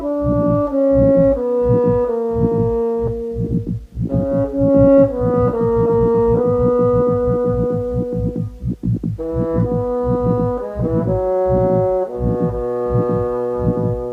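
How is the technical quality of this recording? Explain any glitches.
The recording has two related timing faults close together, so its timing is not faithful to the original.

At about 3.07 s there is a skip ahead: roughly a second of audio is missing, and playback jumps straight to later material with no gap filled in. This happens when a stretch is dropped in transit or discarded by an overflowing jitter buffer while newer audio is already queued. You hear an abrupt jump in continuity. On a waveform the envelope changes shape instantly at the join. On a spectrogram the harmonic patterns break off in a vertical seam rather than fading.

From 3.21 s to 8.04 s there is a jitter buffer speed-up. The buffer was holding more audio than its target, and to shrink that delay the receiver repeatedly cut out short pitch-period-sized pieces. Together these cuts remove about half a second and play the passage at 112% speed. 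The pitch stays the same, but the audio sounds rushed. On a spectrogram the harmonics keep their frequency spacing while events sit closer together in time. The waveform shows many small splice points where cycles were removed.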